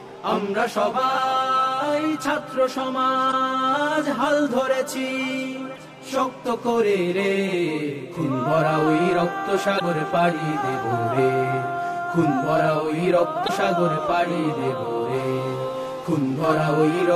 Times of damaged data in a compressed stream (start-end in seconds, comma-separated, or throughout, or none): 3.28-3.34, 5.74-5.79, 9.76-9.81, 13.44-13.50